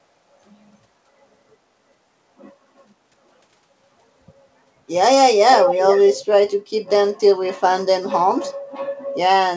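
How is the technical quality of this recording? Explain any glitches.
One glitch stands out, an echo leak, on a call path whose audio stops at 8 kHz. From 5.51 to 6.25 s, a delayed copy of the speech returns about 0.45 s late, only slightly quieter. This is likely an echo canceller failing to remove loudspeaker sound picked up by the far-end microphone.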